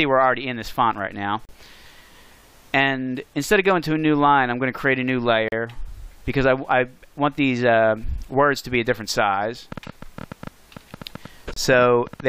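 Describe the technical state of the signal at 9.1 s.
At 9.1 s the signal is intact, with no dropout, distortion, or other fault audible at that moment.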